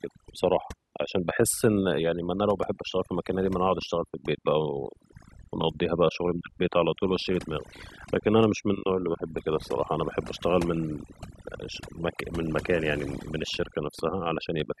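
Overdone noise removal runs throughout the speech, cutting frequency bands near the noise estimate so the background drops to twinkling near-silence.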